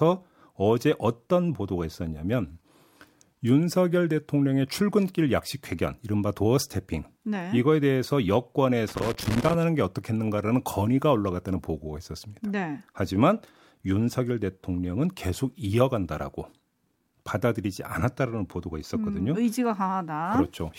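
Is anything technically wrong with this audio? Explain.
Yes, there is one fault. From 8.88 to 9.54 s the speech is broken by loose connector crackle. A worn or dirty contact somewhere in the signal chain is shifting. As it moves, it rapidly makes and breaks the connection. The signal keeps cutting in and out, and any DC on the line turns each break into a pop. For about two thirds of a second you hear an irregular, scratchy burst of crackle over the speech.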